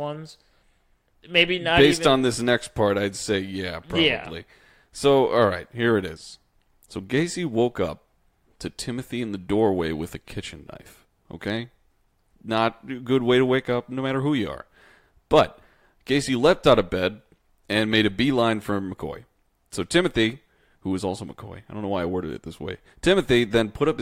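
No technical faults can be heard at any point in the speech.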